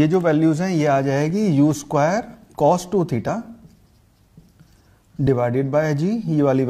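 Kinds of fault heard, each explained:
Overlap between stream segments: the segment timestamps overlap, so the player trims sound that was never actually duplicated, and about 30 ms drops out each time. You hear a small click or skip at 1.30, 3.29 and 5.27 s, matching a 2 s segment length.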